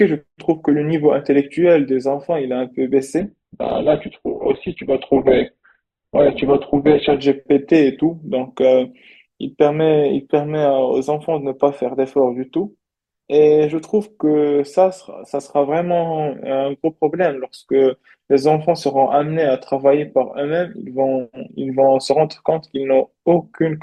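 From 3.20 s to 7.20 s the speech drops to a lower-bitrate version of an adaptive stream: the player fell back to a leaner encoding when the connection slowed, then recovered. For those four seconds nothing survives above about 4.1 kHz, and the thin texture fits a very low-rate Opus setting. What separates this from packet loss is continuity: the quality switches abruptly at both edges, yet no gap or dropout occurs.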